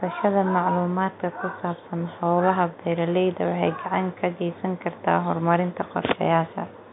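No technical faults occur in this speech at any point, so there is nothing to place in time order.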